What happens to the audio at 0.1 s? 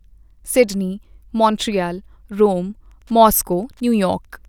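At 0.1 s the audio is intact, with no dropout, click, distortion or other fault.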